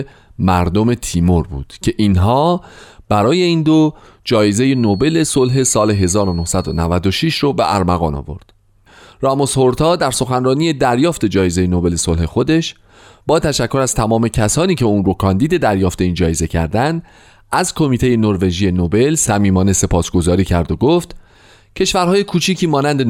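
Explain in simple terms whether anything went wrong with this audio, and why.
From 4.62 to 6.92 seconds, a thin, steady, high-pitched whistle sits quietly behind the speech, well below the level of the talking and slowly swelling and fading in loudness. This is a feedback whistle, a single tone at about 4.3 kHz. It is likely caused by sound from a loudspeaker reaching the microphone and being amplified again. The loop was on the edge of howling, so one pitch kept ringing without growing into a full squeal.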